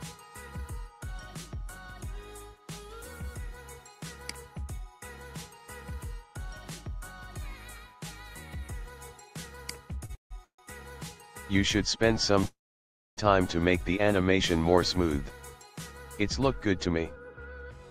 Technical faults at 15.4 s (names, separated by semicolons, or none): none